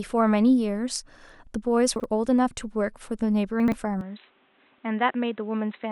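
Around 1.96 to 2.04 s and again at 3.6 to 3.72 s, you get chunks out of order: 40 ms pieces play late, producing a jumbled stutter. From 4.01 s on, the speech goes dull with nothing above 4 kHz, drops roughly 5 dB, and picks up new background noise about 35 dB down, with no gap. That's likely the input switched to a poorer device.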